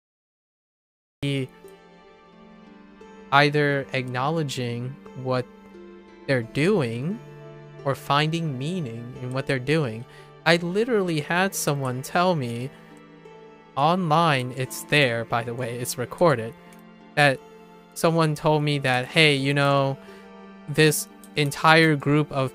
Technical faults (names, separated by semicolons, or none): cut-off start